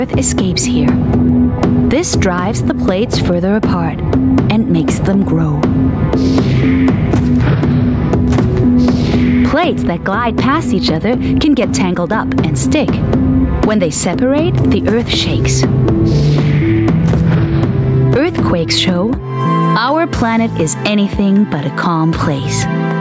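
Gain pumping runs through the whole clip, most likely from input gain set far too high with a fast limiter or compressor pulling it back on each loud sound. The level swings by around 10 dB, squashing loud and soft passages closer together. The call's microphone processing trims the lowest bass and leaves nothing above 8 kHz.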